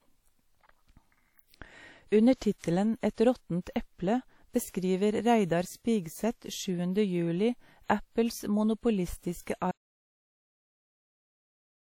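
From the start, the speech carries plainly audible WMA compression artefacts: a ringing, washy quality with hiss that rises and falls with the signal, and nothing above 19.9 kHz. This is likely a transform coder at a low rate, around 48 kbps, spreading quantisation noise over long blocks.

At 9.71 s the audio drops out to silence and stays silent to the end, with no room tone in the gap. The likely cause is a lost input, through a disconnected device, a failed link or a stray mute, while recording carried on.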